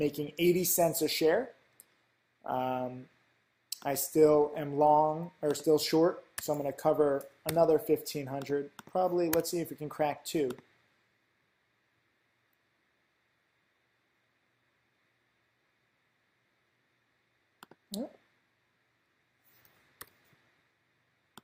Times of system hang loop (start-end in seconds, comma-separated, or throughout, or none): none